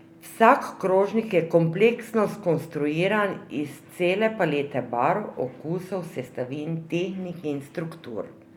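At 6.26 s, compressed frames are skipped. About two 10 ms frames never play, so the speech jumps ahead roughly 20 ms.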